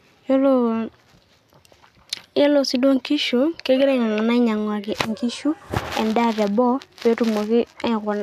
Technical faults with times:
none

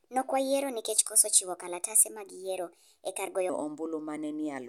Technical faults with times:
0.00-3.49 section at the wrong speed

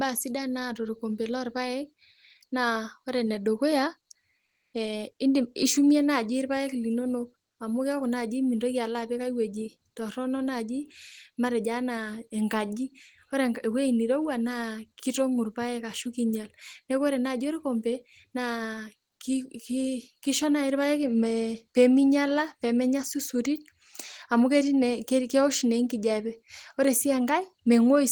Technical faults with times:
4.45-4.73 comfort noise in place of the background

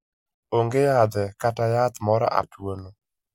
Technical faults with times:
2.43 CD skip

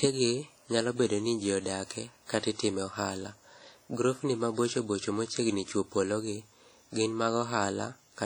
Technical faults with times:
0.00-8.26 WMA compression

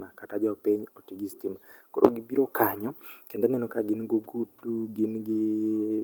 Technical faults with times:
none

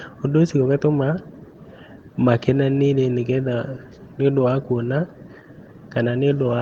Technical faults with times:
none

